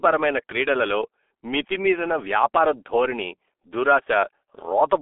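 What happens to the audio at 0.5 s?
At 0.5 s, as throughout the clip, the speech carries G.723.1 codec damage. Each 30 ms frame is squeezed into a very low-rate voice model, heavy coding that points to a rate near 6 kbit/s. The model adapts too slowly to track fast changes. The band runs from about 300 Hz to 3.5 kHz, with nothing above 3.8 kHz, so the speech sounds muffled and hoarse and its consonants are smeared.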